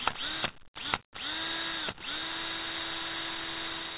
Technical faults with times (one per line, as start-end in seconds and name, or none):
none